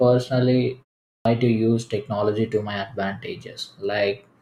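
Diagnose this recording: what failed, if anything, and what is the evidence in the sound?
The failure is at the playback stage: a clipped start after a pause. After a silence of about 0.38 s, the speech resumes at 1.14 s with its onset missing. Roughly 0.11 s is gone, up to 1.25 s, so the first sounds are swallowed and the speech starts abruptly out of nothing. The output device appears to drop into a low-power state during the gap and needs that time to wake before it passes audio again. The muted pause itself is normal. On a waveform, the envelope jumps from flat to full level with no rising attack. On a spectrogram, the energy begins with a hard vertical edge instead of building up.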